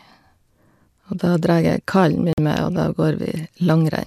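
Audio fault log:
2.33–2.38 s, digital broadcast dropout: the speech cuts abruptly to silence for about 50 ms, leaving a short clean hole before the sound resumes mid-flow. The receiver evidently lost the signal or rejected corrupted frames and muted its output until valid data arrived again. The length of the gap fits roughly two lost frames, and whatever was transmitted during that moment is gone rather than blurred or distorted.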